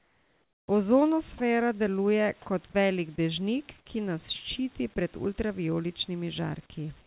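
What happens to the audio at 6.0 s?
Nothing goes wrong at 6.0 s; the speech passes through intact there.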